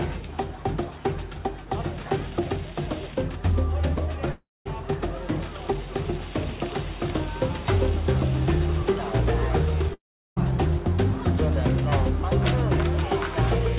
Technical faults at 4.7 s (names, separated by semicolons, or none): long network dropout